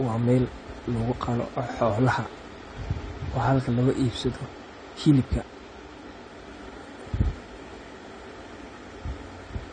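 From start to finish the speech sounds dull and smeared, with nothing above 9 kHz and a warbly, fizzy edge on sibilants. That's likely AAC compression, and the audible damage fits a low bitrate around 32 kbps.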